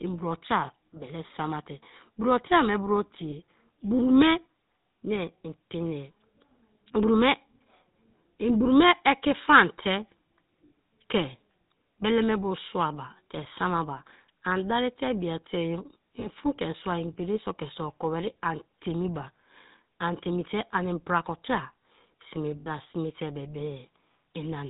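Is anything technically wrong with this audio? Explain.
Yes. Throughout the clip the voice has a plainly audible buzzy, gravelly roughness, and nothing comes through above 4 kHz, so the speech sounds dull and boxy. This is the GSM full-rate codec, and the character fits its 13 kbps rate. The codec models the vocal tract as a filter and excites it with a sparse, regularly spaced pulse train keeping only a third of the excitation samples. That coarse excitation produces the grainy buzz.

There are also three short bursts of lost GSM frames, at 3.30–3.33 s, 16.20–16.27 s and 22.60–22.68 s. Each is a brief rough, metallic ringing where the sound freezes instead of moving on. The first two fit a single 20 ms frame, and the last is longer, about 60 ms, consistent with three frames in a row. The decoder fills each gap by reusing the last good frame's parameters, which holds the sound as that ringing.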